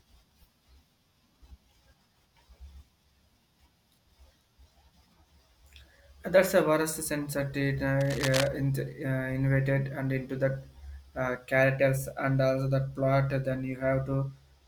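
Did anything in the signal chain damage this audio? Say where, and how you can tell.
Yes. From 8.01 to 8.47 s a burst of dense, irregular scratching and rustling sits over the speech, only a few decibels below it, so it is hard to miss. This is cable scratch noise, most likely from the analogue wiring stage: a worn cable, connector or control was probably disturbed, making its contact resistance jump about rapidly. That fluctuating contact modulates the signal path and injects the ragged noise bursts heard for roughly half a second.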